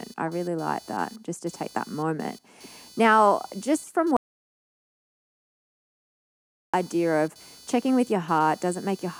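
A speech recording carries computer activity noise throughout: a buzzy, chirping layer pulsing at roughly 500 Hz, sitting well below the voice. It rises and falls with processor or graphics load on the shared ground, not with the talking, which separates it from steady mains hum. At 4.17 s, right after "just from", the audio drops out to silence until 6.74 s, resuming at "of checking with". Around 2.57 s of speech is lost, most likely to a lost input or connection. The gap is silent with no room tone, unlike a noise gate closing.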